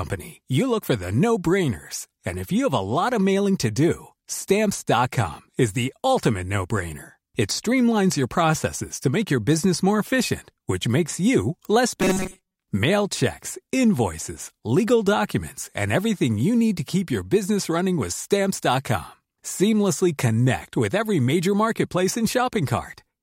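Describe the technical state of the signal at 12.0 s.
From 12.01 to 12.63 s, after "which makes you less", speech becomes a rigid 188 Hz buzz: robotic sound, likely from repeated 5.3 ms buffers replacing most audio.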